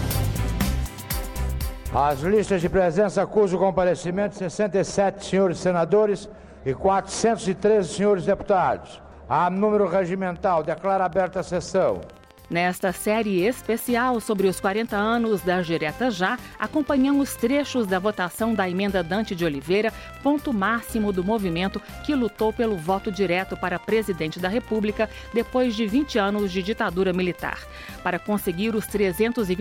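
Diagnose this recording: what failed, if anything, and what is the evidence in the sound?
A regular train of clicks, 14.2 per second and about as loud as the sound, runs from 10.36 s to 29.56 s, likely interference in analogue wiring.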